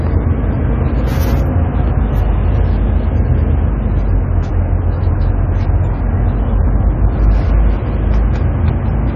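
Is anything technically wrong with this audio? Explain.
Yes. Throughout, the sound is dull and smeared, with a warbling, fizzy texture and nothing above 14 kHz. The likely cause is AAC compression, where AAC-LC at a rate that points to around 32 kbps lowers the cut-off and coarsely quantises its frequency lines.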